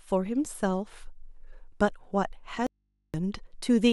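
In this speech clip the sound cuts out abruptly at 2.67 s and returns just as suddenly at 3.14 s, leaving nearly half a second of low mains hum far beneath the speech level: an audio dropout to a faint residue, likely from a momentary signal loss ahead of a still-live input.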